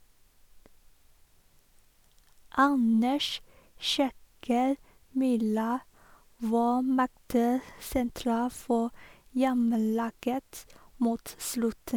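Speech recording with no technical faults audible anywhere.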